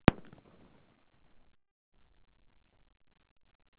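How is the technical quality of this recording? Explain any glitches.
The recording has three timing glitches on a narrowband call path. Everything above 4 kHz is missing, which fits G.711 mu-law coding.

From 1.56 to 1.95 s there is a call audio freeze. The sound stops with a brief decaying continuation, then about 330 ms of silence, for 365 ms of inserted time in all. Playback then resumes exactly where it left off, so nothing is lost, only delayed. The likely cause is packets held up in transit while the jitter buffer drained, with the receiver filling the wait until they arrived.

At about 2.1 s, from 2.09 to 2.12 s, the audio skips ahead. Roughly a fifth of a second of material is dropped and the two sides are joined with only about 10 ms of filler, so the sound jumps abruptly. This is the receiver discarding a stretch while later audio was already queued, which recovers most of the delay built up by the freeze.

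From 2.46 to 3.76 s a jitter buffer slow-down plays the audio at 95% speed. It adds 64 ms by repeating short periodic segments, so the sounds are drawn out at unchanged pitch. It is audible as a slight stretching and possible warble, and reflects the buffer rebuilding its reserve after the skip.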